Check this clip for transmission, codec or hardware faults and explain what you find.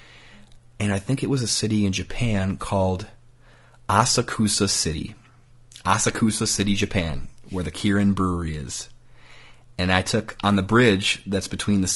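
One codec fault runs through the whole recording. Throughout, the speech sounds rough and grainy, with noise filling the gaps between harmonics. The likely cause is low-delay AAC compression, the AAC-ELD codec of video calls. Its short frames resolve pitch harmonics poorly. The plainly audible damage fits a bitrate near 32 kbps.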